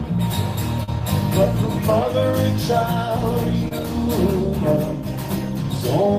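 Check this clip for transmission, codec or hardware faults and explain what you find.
Two short concealed packet losses turn up, at 0.83 to 0.89 s and 3.68 to 3.73 s. About 40 ms and then 20 ms of audio never arrived in time, so the decoder extended the preceding sound to cover each gap before blending back, leaving a brief smear or wobble.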